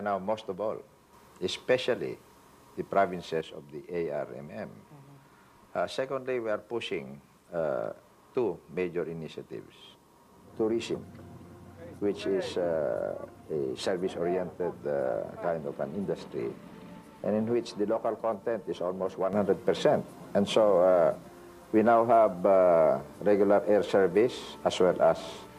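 A sudden gain jump arrives at 1.13 s, lifting the level by about 5 dB until 3.41 s, and another at 19.33 s raises it by about 6 dB through to the end. Each time the sound and its background noise step up together instantly, with no fade, then drop back just as abruptly after the first. The likely cause is a digital gain setting applied from one sample to the next without a ramp.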